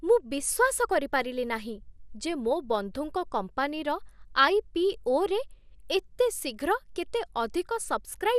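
From start to finish the speech has a dull, gurgling, granular edge, and nothing comes through above about 15.1 kHz. That's likely MP2 compression, the MPEG Layer II kind. The codec splits the sound into 32 sub-bands and shares out a tight bit budget, so the top bands get dropped, bands flicker on and off, and the remaining ones are coarsely quantised. The damage is plainly audible, which fits a rate around 80 kbps.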